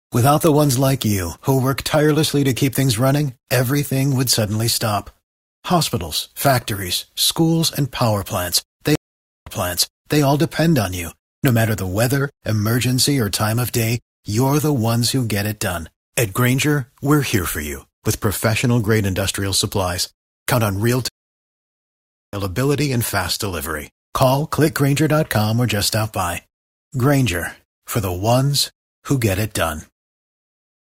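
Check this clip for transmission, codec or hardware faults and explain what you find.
Two faults affect this speech clip: repeated integer overflow cracks and two stream reconnects.

Integer overflow occurs at 0.47, 4.33, 6.46, 11.48 (between "all depend on you" and "matter the weather emergency"), 24.23 (just after "and fast delivery") and 24.76 s. Peaks reaching the integer ceiling, or exceeding it by about 1 dB at 24.76 s, wrap to the opposite sign instead of limiting. Each one is a violent crack, harsher than clipping.

Stream reconnects occur at 8.95 to 10.20 s and 21.08 to 22.38 s. The connection drops, the audio goes silent, and a fresh decoder restarts mid-stream. The first gap is 510 ms, and playback resumes 740 ms earlier, repeating material. The second, after "on real", lasts 1.25 s and resumes about 0.7 s later at "and fast delivery", skipping material.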